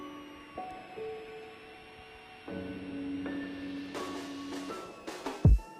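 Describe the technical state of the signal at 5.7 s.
At 5.7 s the switching supply whistle is still present, as it is throughout: a high tone near 3 kHz, roughly 25 dB below the signal. It wanders between 2.53 and 2.96 kHz as the supply's switching follows load, unlike fixed-pitch hum.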